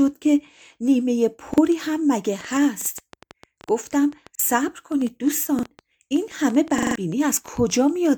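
At 1.54 s a repeated buffer occurs: a piece of speech about 43 ms long plays twice because fresh audio arrived late, which fits a 2048-sample buffer. It is heard as a brief stutter with a hard join, and roughly 40 ms of the speech is lost. From 2.41 s to 7.71 s a train of clicks runs over the speech and through the pauses. There are about 7 per second, at an uneven pace, and they reach roughly the level of the speech itself. Because they keep going through silence, each a near-identical tick rather than a repeat of speech, they point to a likely outside interference or interface problem. Within that stretch, further repeated buffers come at 2.82 s, 4.35 s and 5.59 s, each a single doubled 43 ms piece. At 6.78 s the same piece loops four extra times, to 6.96 s. This gives a stutter and costs about 150 ms of speech. The stutters are told apart from the clicks by their tonal, speech-like content and the hard joins between repeats.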